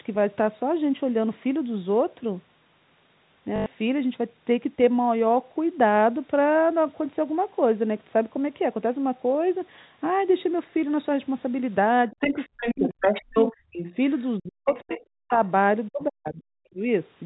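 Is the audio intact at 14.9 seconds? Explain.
No, 14.9 s sits right where two problems overlap. First, there's speech suppressed in double talk, running from 14.38 to 15.41 s. The talker's level drops in pieces, at its deepest by something like 40 dB, adding up to around half a second of lost or gutted sound. The likely cause is both ends talking at once: the echo canceller couldn't tell the local talker from the loudspeaker echo, so it ducked everything.

On top of that, there's the other side's voice leaking through, from 14.66 to 15.52 s. A second voice is audible underneath, roughly 15 dB below the main speech. That's most likely loudspeaker playback that the echo canceller didn't fully strip from the microphone. It's the same overlap that triggered the suppression, so you get the talker chopped up and the far end bleeding in.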